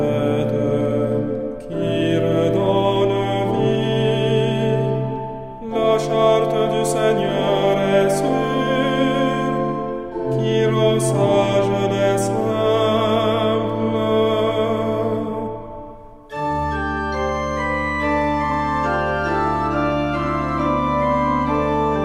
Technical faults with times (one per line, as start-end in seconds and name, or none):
none